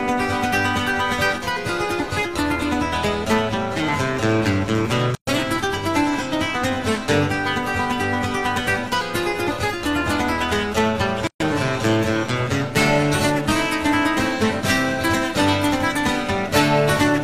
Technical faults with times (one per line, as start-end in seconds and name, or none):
5.15-5.27 gap at a join of encoded pieces
11.27-11.40 gap at a join of encoded pieces